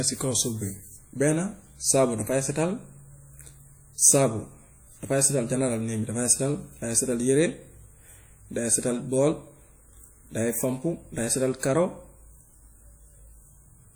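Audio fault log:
throughout, WMA compression: washy, ringing speech with hiss that breathes along with it, likely from WMA encoding smearing quantisation noise, consistent with roughly 48 kbps.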